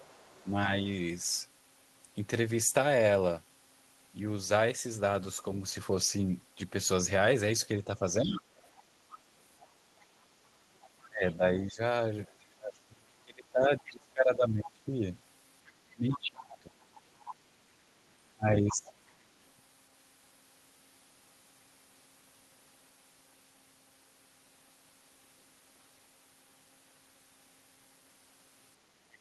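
Other side's voice leaking through, from 0.0 to 0.46 s: a faint second talker sits about 30 dB under the main speech. It is likely that the far end's audio, played on the talker's loudspeaker, reached the microphone and was not fully cancelled. Speech suppressed in double talk follows from 0.44 to 0.69 s as a slight dip of about 5 dB. With both sides active, the canceller likely could not tell its own talker from the echo and turned everything down.

The same suppression returns far more deeply from 7.85 to 8.51 s. The speech drops by up to about 25 dB for close to half a second in total. Leakage then runs from 8.31 to 11.35 s at about 20 dB below the speech. The longest suppressed stretch covers 11.07 to 18.92 s, where the speech is pulled down by as much as about 25 dB, in pieces adding up to around five seconds. Inside that stretch the other side breaks through briefly at 13.85 to 13.9 s, about 20 dB down. 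It returns more strongly from 16.1 to 17.33 s, only about 15 dB below the speech. A last scrap of leakage appears from 18.85 to 19.12 s, about 25 dB down.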